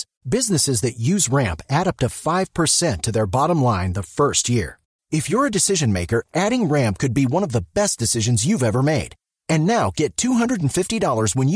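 No technical faults can be heard anywhere in the speech recording. There are no events to place in time, because nothing goes wrong at any point.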